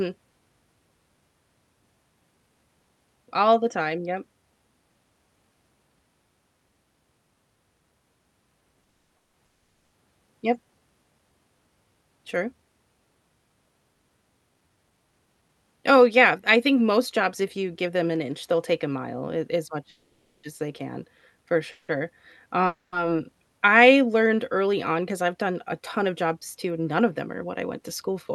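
From 8.83 to 9.35 s the speech hits repeated stalls (stutter): three short gaps, the longest 200 ms, are bridged by continuing the preceding sound, so about 73% of that half-second is filler and the delivery drags without losing content. At 9.45 to 9.95 s a call audio freeze follows, a 480 ms hold where the continued sound dies to near silence for 470 ms before the speech resumes, most likely because packets were held up and the jitter buffer ran dry. From 13.95 to 15.63 s a jitter buffer speed-up plays the speech at about 112% speed with unchanged pitch, trimming roughly a fifth of a second of small pitch-period pieces, which sounds hurried. Further freezes insert a 540 ms pause (260 ms silent) between "mile a as much" and "as they can for" at 19.89 s, a 170 ms buzz right after "as they can for" at 21.71 s, and a 260 ms hold at 22.66 s, 180 ms of it silent. After "I learned", from 24.66 s to the end, a gentler speed-up runs at about 105%, again removing around 200 ms.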